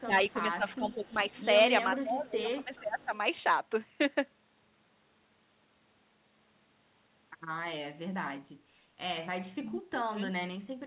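The sound dips at 0.05 to 0.13 s, 0.32 to 0.41 s and 0.57 to 1.19 s, by around 10 to 15 dB. This is speech suppressed in double talk, likely from an echo canceller that couldn't separate the near talker from loudspeaker echo while both sides spoke, so it turned everything down. Unlike a dropout, the sound thins and ducks rather than vanishing. From 0.7 to 1.41 s a faint echo leak rides underneath, about 30 dB below the main level and trailing it by 434 ms. It is likely residue the far end's canceller failed to remove, heard as a distinct delayed copy rather than as reverberation or a doubling. Further suppression follows at 2.02 to 3.13 s, about 15 dB deep, and at 9.57 to 10.27 s, where the drop reaches about 30 dB and the sound nearly cuts out. The dull top end with nothing above 4 kHz comes from the G.711 call codec, not from suppression.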